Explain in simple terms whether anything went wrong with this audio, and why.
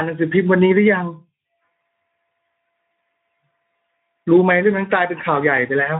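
Yes, something's off: the speech has been squeezed through the Speex codec, an old voice-chat compressor, from start to finish. It's short on detail, so voices come out noisy and hoarse, with the higher frequencies only a hissy fill.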